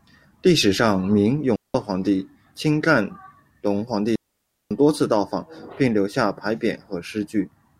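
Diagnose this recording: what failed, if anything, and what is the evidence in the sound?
Digital wireless dropout at the receiver: clean, noise-free mutes of 186 ms at 1.56 s after "历史上明" and 553 ms at 4.16 s after "干隆皇帝". The link lost data, so the receiver muted.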